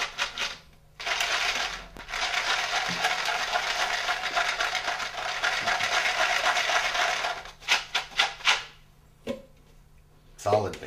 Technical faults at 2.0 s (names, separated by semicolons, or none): loud pop